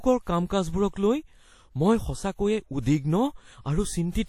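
Throughout the speech, a transform codec, likely WMA compression, has squeezed the signal into a budget that fits about 48 kbps, spreading quantisation noise across long blocks and cutting everything above 17 kHz. It sounds plainly ringing and washy, with hiss breathing along with the speech.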